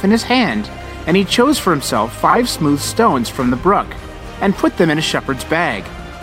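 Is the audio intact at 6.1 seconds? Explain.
Yes, at 6.1 seconds the audio is intact, with no fault present at that moment.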